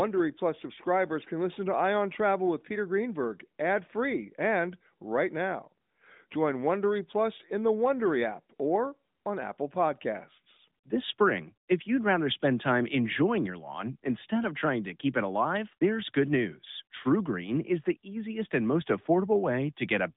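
No technical faults can be heard anywhere in this recording.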